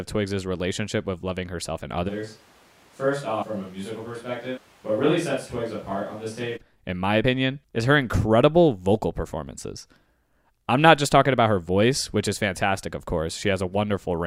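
From 2.1 to 6.56 s, after "with loving herself and" and until "in my", the close microphone likely drops out, leaving a switch to a distant microphone. The sound turns suddenly roomy and hollow, about 10 dB quieter, with room noise only about 25 dB below it.

Within that stretch, at 3.41 to 3.43 s, compressed frames are skipped. The decoder drops about a tenth of a second, which fits five 21.3 ms frames. At 7.23 s, between "in my" and "is her incredible vocal", roughly two frames are skipped in the same way, and the sound jumps ahead about 40 ms.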